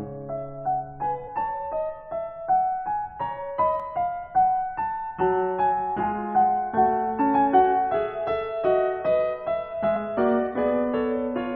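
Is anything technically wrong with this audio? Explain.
Yes. The music has damaged data in a compressed stream. Brief blips occur at 1.27, 3.80 and 6.03 s, and from 9.95 to 9.97 s. Corrupted bytes make the decoder misread frames and lose sync. Each is a brief glitch.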